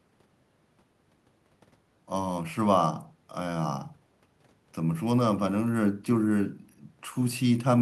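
Nothing technically wrong can be heard anywhere in this speech recording.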